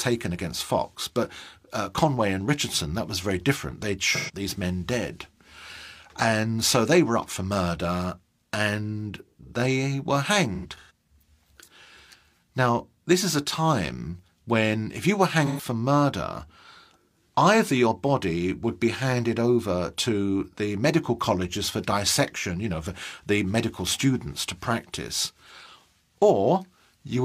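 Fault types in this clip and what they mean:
AAC frame loss with concealment: pieces of the coded stream went missing, and the decoder filled the gaps by reusing the last good spectrum, so the sound turns smeared and phasey instead of dropping out. Patches of about 128 ms sit at 4.15 s and 15.45 s. Between 10.55 and 10.91 s, about 213 ms of loss is scattered, with the longest run about 150 ms. A spectrogram shows blurred, horizontally stretched bands without fine detail, and the waveform looks unusually uniform there.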